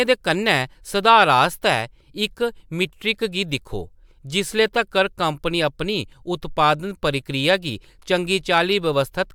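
No technical faults are audible.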